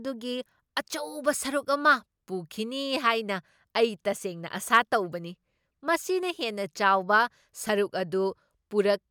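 There are no technical faults to describe at any point in this speech recording.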